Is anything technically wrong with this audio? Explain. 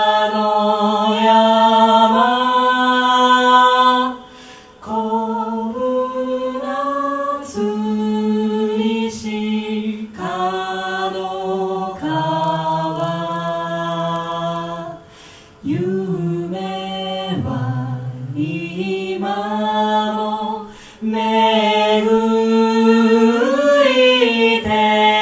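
Yes. Resampler restarted on every block, 12.44 to 15.52 s: converting each 40 ms block separately leaves an error at every edge, heard as a 25 Hz buzz.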